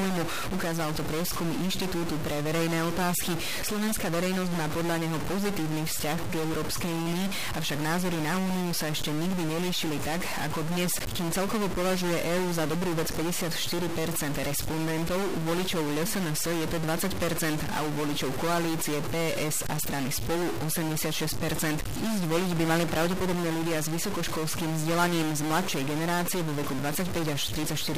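Harsh, buzzy distortion runs throughout, with pauses filled by noise at about -25 dBFS, likely from a stuck bit. Unlike clipping, it persists even in silence.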